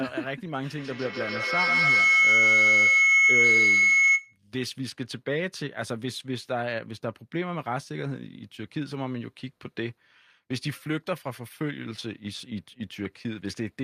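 A feedback loop forms between a microphone and a loudspeaker sharing the room, with gain above unity on each pass. From 0.78 to 4.39 s, a feedback howl near 2 kHz builds, pulsing roughly every 150 ms, peaking about 10 dB above the speech.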